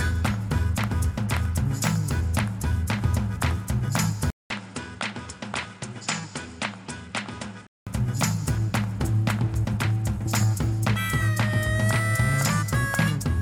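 At 4.30 s, after a 200 ms silence, the sound drops around 10 dB, loses everything above 9.8 kHz and gains a new noise floor, until 7.87 s. This is likely an input switched to a poorer device, with its narrower band and different tone.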